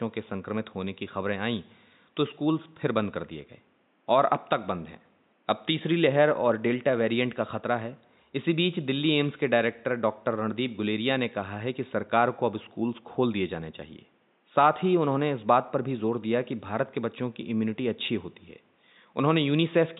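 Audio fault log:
Nothing stood out on listening to this speech recording, with only low room noise sitting about 42 dB beneath the talking.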